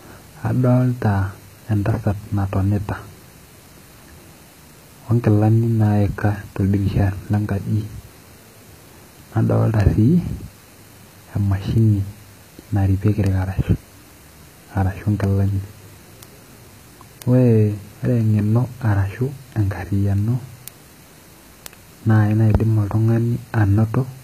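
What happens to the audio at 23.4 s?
At 23.4 s the clip is inside a run of word clock ticks that lasts from 0.42 s to 24.13 s. A receiving clock not locked to the sender's drifts by a few tens of parts per million, so roughly every half second one sample is dropped or repeated. This produces a sharp tick of uneven strength. On a spectrogram each tick is a thin vertical line spanning the band, and on the waveform it is a one-sample step.

The same moment also carries plainly audible codec damage, likely from HE-AAC at about 20 kbps. Only the lower spectrum is coded directly, and the treble is rebuilt by copying lower bands upward under a coarse envelope, so harmonics do not line up across the crossover. A spectrogram shows repeated, patterned texture in the upper bands and nothing above 14.9 kHz.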